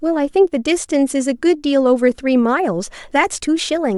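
Nothing in the speech stood out as a technical problem on listening.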